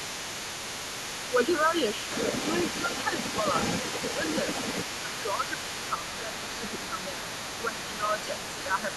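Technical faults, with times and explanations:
throughout: channel delay (comb filtering). One channel arrives a fraction of a millisecond behind the other, and when the two are summed to mono the shared content cancels at regularly spaced frequencies. The first notch sits around 700 Hz, with further notches repeating higher up at odd multiples of it. The missing bands are fixed, so the sound takes on a steady hollow, phasey colour that does not change as the talker moves through different sounds.
throughout: other side's voice leaking through. A second voice runs underneath the main talker for the whole clip, only a few dB quieter, loud enough to compete rather than sit in the background. The likely cause is the far end playing on the talker's loudspeaker and being picked up by the microphone, with the echo canceller failing to strip it out. The result is two voices heard at once, with the intruding one carried along in the same mix.
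5.02–5.45 s, 5.97–6.61 s, 7.61–7.77 s, 7.97–8.31 s: speech suppressed in double talk. In each of these spans the main talker's level sags while the other voice is active. The first dip is the deepest, roughly 10 dB, and the later three drop by around 5 dB. Fragments of about 0.1 to 0.4 s each are pulled down. The likely cause is the echo canceller, unable to separate local speech from loudspeaker echo, attenuating both together.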